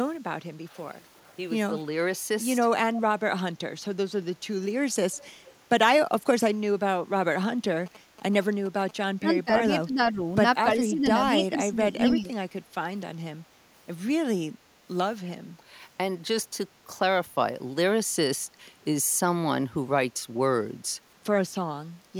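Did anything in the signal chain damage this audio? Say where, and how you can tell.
Yes. Call processing: faint echo leak at 0.69, 1.17, 5.16 and 5.45 s, repeating speech 291 ms later; the spectrogram shows weak delayed ghosts, likely from an incompletely cancelled loudspeaker path.

Analogue wiring: GSM signalling bursts from 7.86 to 8.91 s, a galloping buzz at 217 Hz rectified from radio bursts, showing as regular vertical stripes in the spectrogram.

Call processing: speech suppressed in double talk at 9.19–10.2, 10.73–11.08 and 11.38–12.29 s, likely caused by the canceller ducking both talkers; the waveform shows level dips of up to 15 dB.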